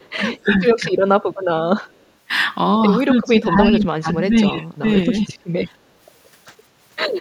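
From 0.0 to 0.1 s there is an echo leak: a faint delayed copy of the speech, trailing it by 219 ms and sitting around 40 dB below it, most likely because a far-end echo canceller let part of its loudspeaker pickup back into the return path. The same faint 219 ms echo comes back from 1.82 to 2.06 s, around 40 dB below the direct speech.

Speech suppressed in double talk shows up as level dips, likely where the echo canceller mistook simultaneous talk for echo and attenuated it. From 0.42 to 0.61 s the speech drops by roughly 15 dB, and from 0.8 to 0.92 s it takes a shallower dip of about 5 dB. The longest and deepest stretch runs from 3.06 to 4.58 s, where the speech is pulled down for around a second in total, by roughly 25 dB at its lowest. Brief dips follow at 4.8 to 4.87 s (about 15 dB) and 5.07 to 5.27 s (about 5 dB).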